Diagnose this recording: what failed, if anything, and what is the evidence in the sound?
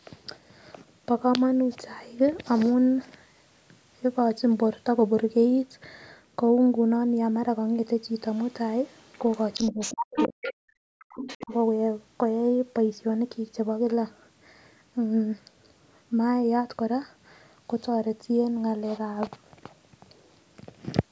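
A second voice bleeds in faintly at 8.35 to 8.46 s, nearly as loud as the talker from 9.07 to 10.53 s, then quieter from 11.1 to 11.56 s. This is other side's voice leaking through, likely residual loudspeaker echo the call processing's echo canceller missed.

The talker's voice dips sharply, by up to roughly 40 dB, from 9.71 to 10.69 s and briefly around 11.42 to 11.53 s. This is speech suppressed in double talk: the canceller likely ducked both voices at once.

Room sound drops out by about 40 dB for roughly 0.15 s between 10.97 and 11.1 s. This is background gated by the echo canceller, which clamped the microphone while the loudspeaker played.

A low thump lands at 19.27 s while the speech continues unchanged. This is a DC step at the converter or analogue input, where the waveform's zero line jumps and then drains away through a 20 Hz high-pass.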